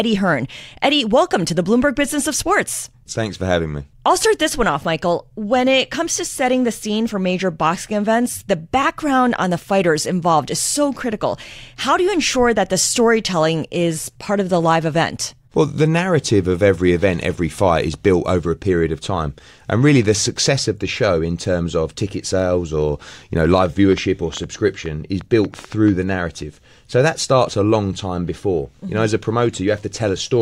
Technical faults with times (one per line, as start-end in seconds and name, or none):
23.45-25.89 train of clicks